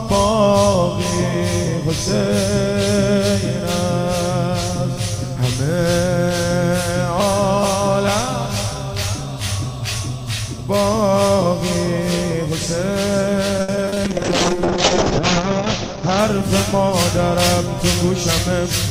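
From 13.61 to 13.98 s there is repeated packet loss with a robotic sound. Five short holes fall within about 0.37 s, the longest near 70 ms. Each is bridged by stretching the preceding audio, which covers roughly 150 ms, while another 100 ms is simply absent. With about 41% of that stretch synthesised rather than received, the audio sounds choppy and robotic, with pieces missing between the patches.

Almost immediately after, from 14.06 to 18.48 s, a call bitrate drop takes hold. The encoder, reacting to a collapsed bandwidth estimate, codes far more coarsely. The sound points to a fall from around 96 kbps to roughly 6 kbps. The audio bandwidth narrows from 20 kHz to 8 kHz, so everything above that cut-off disappears. The audio turns muffled, rough and watery, worst for about 1.36 s at the lowest rate, before quality climbs back toward the end of the span.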